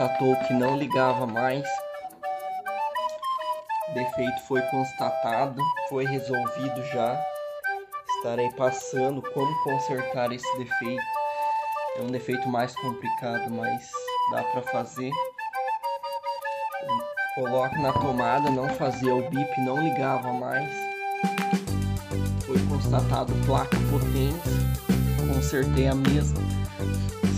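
From 23.84 to 25.60 s there's a stretch of low bit depth with noise shaping. The audio is squeezed down to about 7 bits, and the rounding error is pushed up into the treble, so you hear a thin, steady hiss climbing toward the top end, sitting only around 15 dB under the signal.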